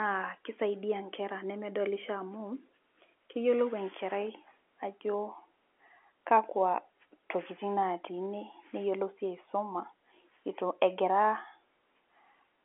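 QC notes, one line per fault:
No faults found; the line's telephone band, with nothing above about 3.8 kHz, is what the G.711 coding passes.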